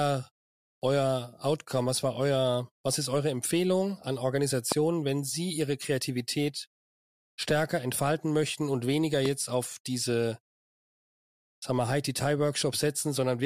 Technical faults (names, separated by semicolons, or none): loud pop